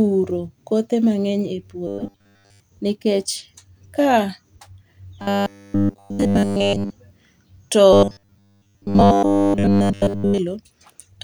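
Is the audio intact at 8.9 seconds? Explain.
No. From 7.93 to 10.38 s there is robotic sound from repeated short buffers: new audio likely stopped arriving in time, so roughly 10 ms chunks were looped almost continuously. That imposes a rigid 100 Hz metallic buzz that only loosely tracks the speech.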